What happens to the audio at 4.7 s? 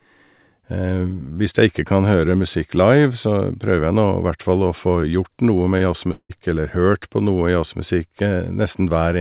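Nothing goes wrong at 4.7 s: the speech carries on intact through that moment, with only the steady narrowband sound of the call path, nothing heard above 4 kHz, which fits a G.711 mu-law link at 64 kbps.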